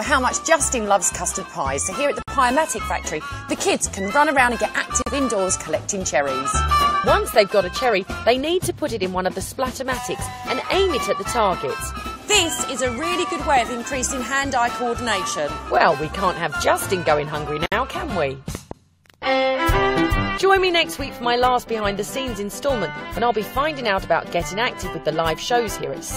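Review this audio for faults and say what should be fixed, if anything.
The audio was encoded in separate pieces and joined without trimming the encoder's start-up delay and final-frame padding, leaving a gap at a join of encoded pieces. Brief, slightly smeared silences of 53, 43 and 59 ms open at 2.22, 5.02 and 17.66 s before the sound resumes. To prevent it, encode the material in one pass, or trim each piece's encoder delay and padding before joining (gapless handling).

A sudden voltage spike, likely from a plug, switch, static discharge or driver glitch, entered the signal path and produced a loud pop. It is heard as two sharp pops in quick succession between 18.55 and 18.74 s, about 10 dB above the surrounding sound, which continues underneath. To prevent it, secure connections and avoid switching or plugging equipment while recording, and check grounding and driver stability.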